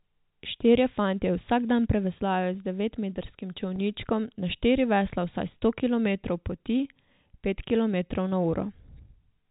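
Speech clip carried over G.711 telephone coding, band-limited to 4 kHz, with a brief packet loss with pitch repetition at 3.76 to 3.78 s, just after "dan preveslajo z devetmetrskim". The receiver bridged the roughly 20 ms gap, consistent with one lost packet, by repeating the last pitch period, producing a momentary held, buzzy tone.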